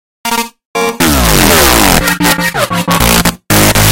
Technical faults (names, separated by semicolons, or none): integer overflow